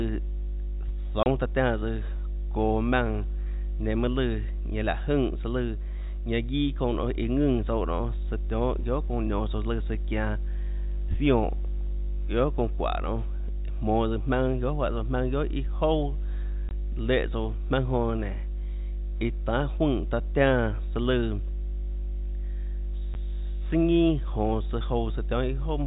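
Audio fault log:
Throughout: mains hum. A steady low tone at 50 Hz, with some low harmonics, sits under the speech at roughly the same loudness as the talker. Power-line current is leaking into the signal, most likely through a ground loop or a nearby transformer. Unlike rumble or wind, it holds one fixed pitch and never changes level, so it stays just as loud in the pauses. Its 50 Hz fundamental, rather than 60 Hz, points to a European-style mains supply.
1.23–1.26 s, 16.69–16.71 s, 23.14 s: packet loss filled with silence. The speech drops out abruptly for 30 ms just before "taã tiánã", then for 20 ms and 10 ms at the later two points, with hard edges. The gaps come in whole multiples of 10 ms, which suggests 10 ms packets lost in transit and replaced by plain silence. Concealment would smooth or repeat the sound, and codec dropouts would smear the edges. Here the holes are fully silent with sharp cuts. 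The 4 kHz telephone band of the G.711 coding is heard unchanged on both sides of each gap.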